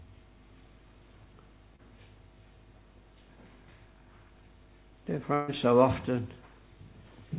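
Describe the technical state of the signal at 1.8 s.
Short concealed packet loss around 1.76 to 1.89 s: about 20 ms of audio went missing, and the receiver extended the preceding sound to fill it, leaving a brief smear.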